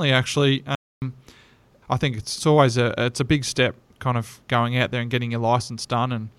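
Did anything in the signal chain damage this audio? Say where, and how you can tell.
Yes. A playback stall: the speech drops to silence from 0.75 to 1.02 s, about 0.27 s, then resumes. This is likely a starved or blocked playback buffer.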